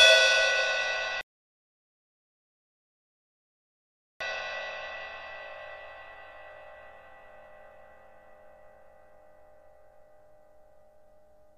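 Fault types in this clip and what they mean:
rebuffering stall: playback outran the downloaded audio, so the player halted and waited for more data. The sound drops to silence from 1.21 s to 4.21 s, about 3 seconds, then picks up exactly where it stopped, adding time without losing any material.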